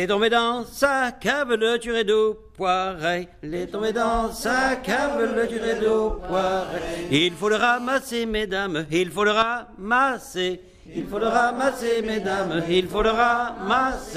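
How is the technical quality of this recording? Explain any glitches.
The recording is marred by phone interference in its middle, two distinct patterns back to back.

GSM phone buzz, 6.33–7.97 s: a nearby phone in a call transmits 217 bursts a second, which the audio circuit rectifies. The result is a hard, raspy buzz about 22 dB below the signal, showing on a spectrogram as stacked harmonics of 217 Hz.

GSM signalling bursts, 8.02–9.54 s: the phone's user falls silent, so it sends only short burst groups. These are heard as even ticks with a longer buzz twice a second, well below the signal, visible as regularly spaced spikes in the waveform.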